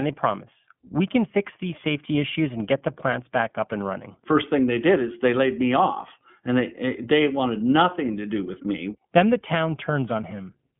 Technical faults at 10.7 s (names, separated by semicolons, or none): iLBC codec